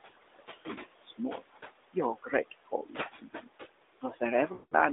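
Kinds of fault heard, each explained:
Noise suppressor artifacts: The room noise, about 12 dB below the speech, is pushed down by about 20 dB between phrases and rises again under the talking, because the gain changes frame by frame across bands.
Speech cut by the noise suppressor: Parts of the speech itself are turned down with the noise, by about 17 to 21 dB, at 0.35–0.5, 0.66–1.43, 2.16–2.33 and 2.51–3.49 s. Soft sounds go faint and swallowed.
Lost AMR speech frames: From 4.54 to 4.74 s, about 180 ms, the decoder keeps repeating the last good sound with falling gain, which fits a run of about nine lost 20 ms frames. It stretches out and fades to silence, rather than being turned down like the suppressor cuts.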